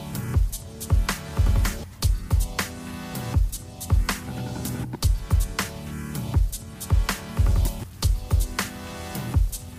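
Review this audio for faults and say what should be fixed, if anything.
From 7.63 s to the end at 9.78 s the sound turns grainy and gritty, with distortion that tracks the signal, sitting around 30 dB below it. This is likely low bit depth without dither: rounding to about 7 bits leaves errors that follow the waveform. Keep full resolution through processing and add dither before any reduction in word length.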